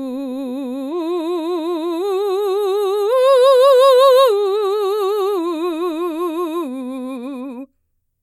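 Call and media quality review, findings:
No faults found in this music clip. Nothing to action on this sample.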